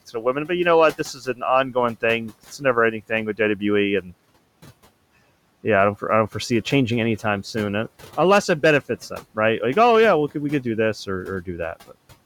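The noise suppressor mistook speech for noise, so speech was cut by the noise suppressor at 0.13–0.5 s (before "you know what"), 0.92–3.63 s (after it), 4.01–4.14 s and 11.42–11.96 s (after "we could do this"). These spans dropped by about 14 to 18 dB, leaving the speech faint and swallowed.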